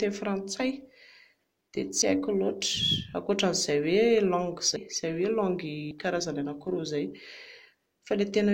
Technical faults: sample clock jitter; compressed frames skipped

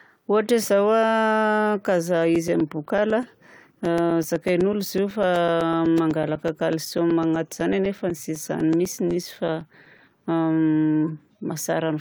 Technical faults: periodic USB or driver dropouts

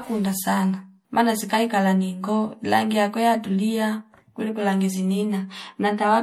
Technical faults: MP3 compression

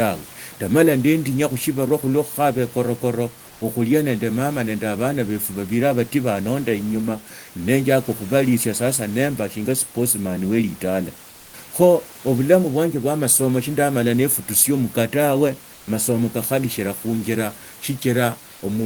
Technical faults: comfort noise in place of the background

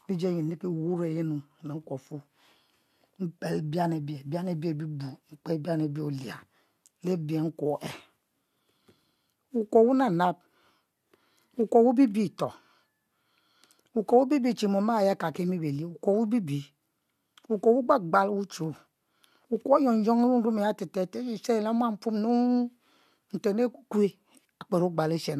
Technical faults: none

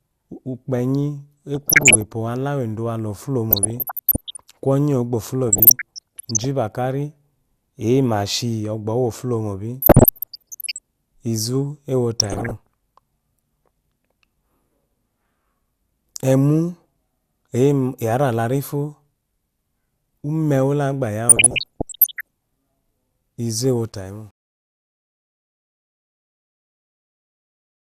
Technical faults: DAB burbling; truncation distortion on a fade

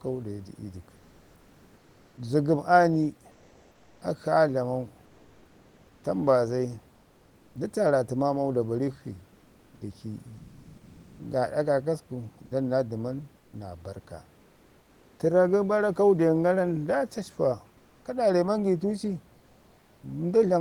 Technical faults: comfort noise in place of the background

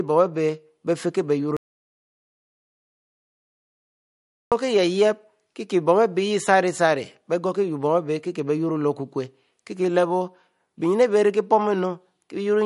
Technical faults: MP3 compression; audio dropout to silence

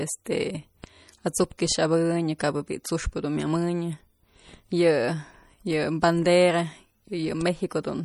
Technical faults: MP3 compression; pre-echo

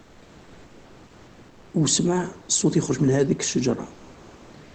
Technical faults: comfort noise in place of the background

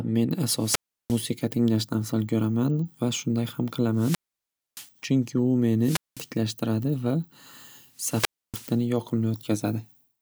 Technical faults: wireless microphone squelch dropout

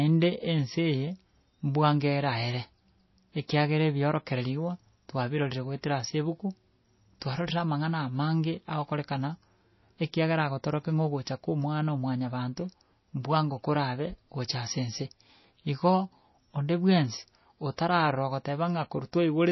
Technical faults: MP3 compression

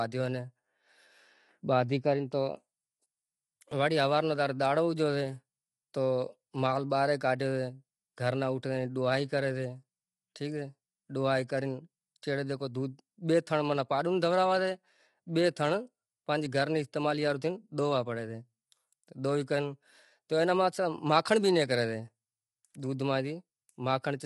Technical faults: low-delay AAC compression; dropped buffer (overrun)

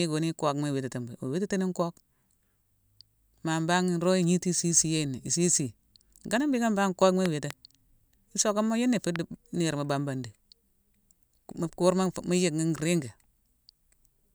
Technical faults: loud pop

